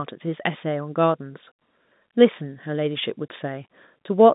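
No faults heard in this speech; the G.711 telephone path is band-limited to roughly 150 Hz to 3.7 kHz with nothing above 3.8 kHz, as the format dictates.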